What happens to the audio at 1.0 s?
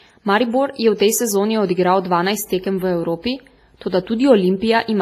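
Pre-echo at 0.98 s, between "je v" and "tej sezoni": the codec spread quantisation noise sized for the next attack back through its block, so an 18 ms hiss smears the onset. Underneath, heavy transform coding, likely WMA compression at a rate that fits 24 kbps, leaves ringing, washy sound with breathing hiss and nothing above 15.3 kHz.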